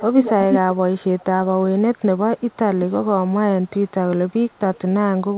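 Speech with an echo leak. A delayed copy of the voice returns at 0–0.31, 0.51–0.64, 1.18–1.24, 1.95–2.0, 2.37–2.56, 3.67–3.91 and 4.29–4.79 s. The delay drifts from 341 to 361 ms. The first two echoes are about as loud as the speech. The rest are far fainter. The likely cause is a loudspeaker echo canceller at the other end that fails to remove its microphone pickup.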